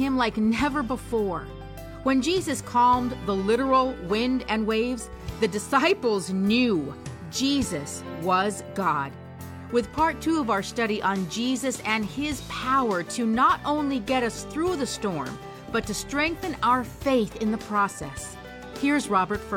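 No technical faults can be heard anywhere in this clip.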